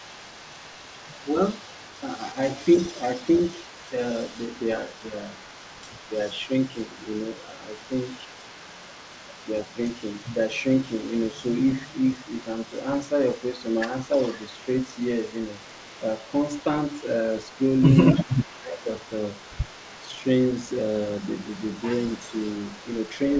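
From 0.0 to 10.49 s and again from 10.66 s to the end, a far-end echo canceller likely failed to remove everything its microphone picked up from its loudspeaker, so an echo leak returns a faint delayed copy of the speech. It trails the original by about 315 ms and sits roughly 30 dB below it. The band stops at 8 kHz, which fits the G.722 call path.

Between 18.18 and 18.88 s, both sides talk at once. The canceller likely could not tell the local talker from the returning loudspeaker signal and turned both down, so the speech is suppressed in double talk. For about half a second in total, the voice dips by around 15 dB at its deepest.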